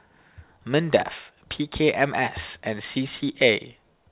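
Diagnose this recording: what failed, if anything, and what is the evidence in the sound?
Nothing failed in this recording; the speech came through the call path as expected, with the band stopping at 4 kHz as a G.711 call would.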